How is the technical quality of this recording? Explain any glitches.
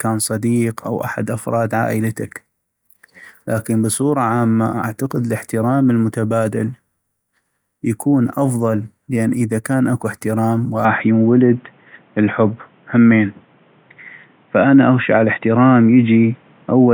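The recording has one fault. From 10.85 s to the end, the speech turns dull and boxy, likely from an input switched to a poorer device. On a spectrogram everything above 3.8 kHz vanishes abruptly. The waveform's level steps by roughly 5 dB with no gap, and a faint new noise floor appears.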